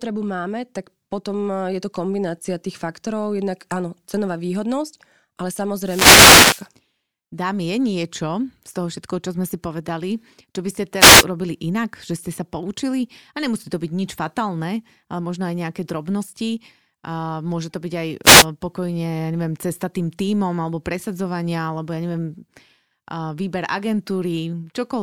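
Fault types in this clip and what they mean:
Wireless microphone noise hit: a brief swish of static washes over the speech three times, longest at 5.81 to 6.68 s just after "áno cenová výhodnosť ale", then shorter bursts at 10.98 to 11.25 s between "povedali čo by ste" and "urobili inak že ste", and at 18.23 to 18.46 s just before "pokojne ja neviem cesta". The analogue FM radio link fades as reflected signals cancel, so receiver noise rises.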